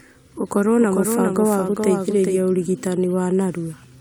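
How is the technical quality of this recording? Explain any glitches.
The recording has one clear fault, a doubled audio track, from 0.76 s to 2.40 s. During that stretch, the speech is heard twice. A second copy trails the first by roughly 400 ms, about 5 dB quieter. It carries the full frequency range, with no decay or room colour. It switches on and off abruptly at both ends. The likely cause is the same signal reaching the mix twice, once through a slower path.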